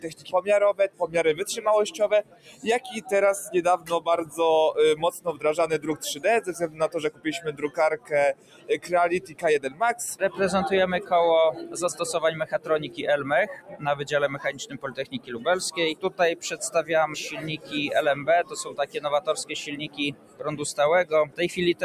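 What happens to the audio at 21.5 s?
At 21.5 s the audio is inside a stretch of sound cut by the noise suppressor that begins at 17.57 s and runs to the end of the clip. The suppressor has classed held and decaying material as noise and pulled it down by up to about 15 dB. In total, about a second and a half of that span is affected. Onsets still come through, but sustained parts and tails sink or are clipped short, so the sound thins and drops away unnaturally.

The same behaviour underlies the whole clip: a noise suppressor applied to music or sounds, designed for speech, is treating steady tones, ambience and reverb as background to be removed. Its gain reduction swings by something like 15 dB as the material changes. This makes the sound pump, flutter or thin out, with level dipping between attacks.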